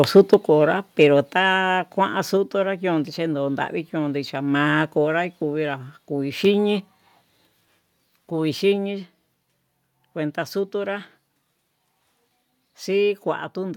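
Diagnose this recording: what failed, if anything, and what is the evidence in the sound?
Microphone overload at the converter: harsh, crackling flattened peaks at 0.16–0.34 s and 1.01–1.03 s, driven about 4 dB and about 1 dB past full scale, likely from excessive input gain.

Microphone volume stepped down in call processing: abrupt level drops of about 3 dB at 0.34 s, about 4 dB at 1.35 s and about 2 dB at 7.47 s, likely gain control reacting to the overload.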